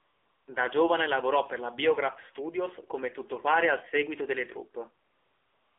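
From 0 to 0.48 s there is AMR comfort noise. The phone treated this stretch as silence and sent no speech frames. The receiver filled the 475 ms gap with synthetic noise built from a rough level and spectrum. It sounds smooth, steady and artificial.

The whole clip passes through the AMR narrowband mobile codec. Only about 300 Hz to 3.5 kHz survives, so the speech is thin and boxed in. The codec rebuilds the voice from a vocal-tract model and a few pulses per frame. The buzzy, synthetic grain fits a low 7.4 kbps mode.

From 5.06 s to the end, AMR comfort noise returns. Again no speech frames arrived, this time for 735 ms. The generated hiss switches in abruptly and replaces the real background with the same flat, smooth texture.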